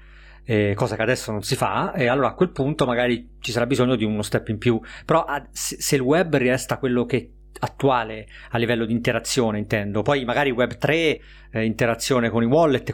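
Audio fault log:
throughout, mains hum. A steady low tone sits under the speech at 50 Hz, with some low harmonics. It stays roughly 25 dB below the speech. A ground loop or nearby transformer is coupling the power line into the signal.
1.47 to 3.47 s, adaptive stream at a lower bitrate. After "cosa che adesso non" the treble turns thin, with nothing above 14.9 kHz. Codec artefacts rise. The connection slowed, so the player switched versions. This fits a drop from 96 kbit/s AAC to 20 kbit/s HE-AAC. Quality returns suddenly before "sarà bisogno di uno", with no gap.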